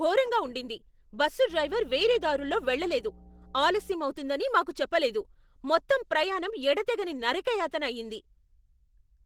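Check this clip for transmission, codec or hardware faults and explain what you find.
One codec fault runs through the whole clip: Opus compression, likely at about 16 kbps in hybrid mode, making speech hoarse and grainy. A spectrogram shows noise-filled bands extending to about 20.2 kHz.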